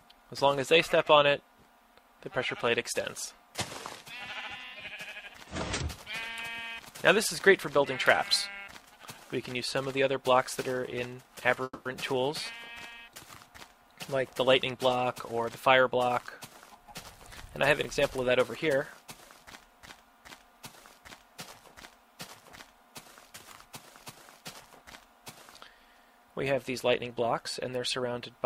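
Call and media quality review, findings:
Call audio freeze, 11.63–11.87 s: the last sound is stretched into a fading fill of about 220 ms, ending in roughly 30 ms of silence. This is likely jitter-buffer underrun from held-up packets. Unlike a dropout, the sound resumes where it stopped, with nothing lost and about 220 ms of added delay.

Jitter buffer speed-up, 15.01–17.51 s at 106% and 18.17–19.09 s at 108%: the sound is hurried but the pitch is unchanged, which distinguishes it from resampling. Repeated trimming of pitch periods cuts about 150 ms and 70 ms of backlog.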